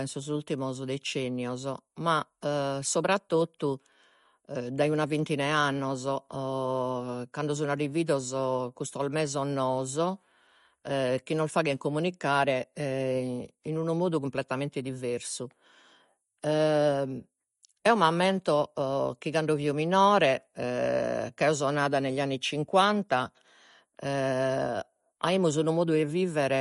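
From start to finish the speech has a watery, swirling quality, with metallic chirps on s sounds and softened consonant attacks. Nothing comes through above 11.2 kHz, so the top end sounds dull. This points to MP3 compression, likely at a low bitrate around 48 kbps. Starved of bits, the encoder cut the treble at a fixed frequency and dropped weak frequency lines that switch on and off from frame to frame, which produces the swirl.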